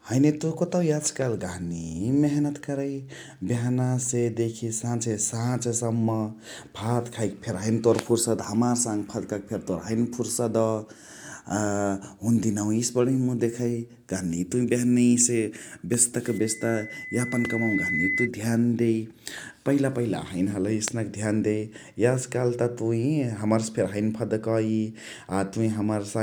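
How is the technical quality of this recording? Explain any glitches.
The recording has one clear glitch: loudspeaker feedback squeal from 16.27 to 18.29 s. A microphone picked up its own loudspeaker, and the loop gain at 2 kHz exceeded unity, so that frequency fed on itself. It swells over about a second and a half into a piercing tone, roughly as loud as the speech.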